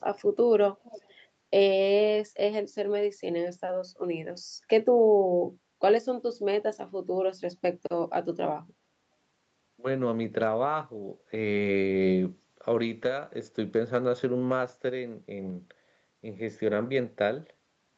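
From 0.83 to 1.14 s there's a short echo leak: a faint, delayed copy of the speech trails the original by about 395 ms, sitting well below the main voice and lasting only a fraction of a second. The likely cause is a far end playing the call over a loudspeaker, where the echo canceller didn't fully scrub what its microphone picked back up, so that scrap got sent back down the line.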